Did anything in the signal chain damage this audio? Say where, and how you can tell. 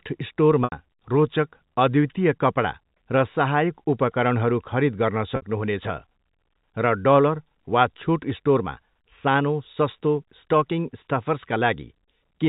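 Yes. Network stage: packet loss with pitch repetition at 0.64 s (80 ms, before "रोचक अद्वितीय कपडा र") and 5.36 s (60 ms, after "उपकरणहरू खरीद गर्न"). The last pitch period repeats, giving a brief held buzz.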